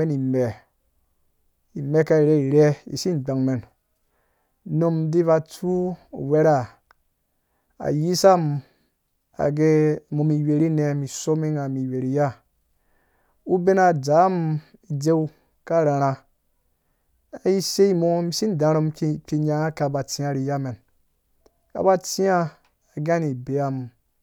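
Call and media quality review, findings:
No audible faults found in this speech recording.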